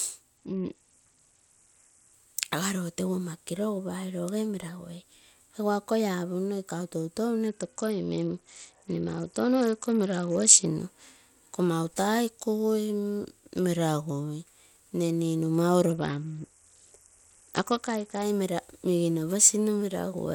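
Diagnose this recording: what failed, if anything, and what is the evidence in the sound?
A Bluetooth SBC bit pool drop at the codec stage: the link starved the encoder, which fits a fall from bit pool 31 to 8. From 0.37 to 2.14 s, 7.48 to 10.66 s and 15.90 to 18.22 s the speech loses treble and turns gritty, then recovers.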